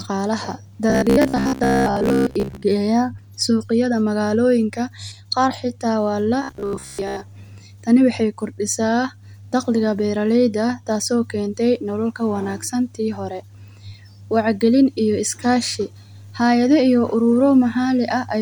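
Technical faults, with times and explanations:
0.90–2.63 s and 6.43–7.23 s, robotic sound from repeated short buffers: speech becomes a rigid metallic buzz at about 67 Hz. This is likely from audio arriving too seldom, so a roughly 15 ms segment repeats and replaces most of the real signal, imposing that fixed pitch.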